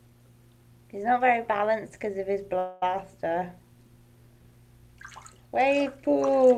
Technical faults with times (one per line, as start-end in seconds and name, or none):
2.58-2.83 call audio freeze